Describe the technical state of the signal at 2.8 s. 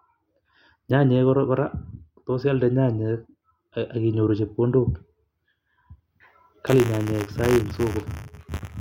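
At 2.8 s the speech signal is intact, with no audible fault at that moment.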